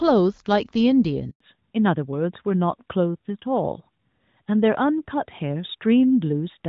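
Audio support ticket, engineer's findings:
Handover gap, 1.30–1.40 s: audio cuts to silence for 100 ms. Network handover; no speech frames delivered while the link switched, so that stretch is lost.

Fallback to narrowband from 1.40 s to end: nothing above 4 kHz, duller and rougher tone than the clean HD Voice before it. Codec renegotiation after handover; points to AMR-NB at 12.2 kbit/s replacing AMR-WB.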